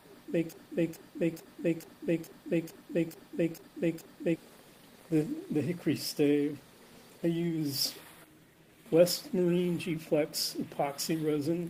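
From 0.53 s to 4.36 s a broken-record loop takes over: one 0.44 s fragment repeats exactly, nine times back to back, likely because the player or stream stalled on its last buffer. Unlike echo, nothing decays, and the audio that should have played is lost.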